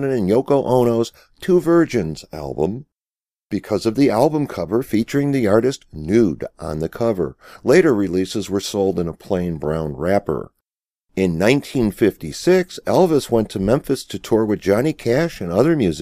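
No technical faults can be heard anywhere in the speech recording. There is nothing here to locate in time or explain.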